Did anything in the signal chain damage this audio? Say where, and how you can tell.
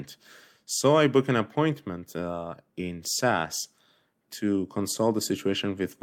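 No, none of the stages between capture and playback left a mark that can be heard in this speech recording. Listening through the whole of it turns up nothing that points to damage anywhere along the chain.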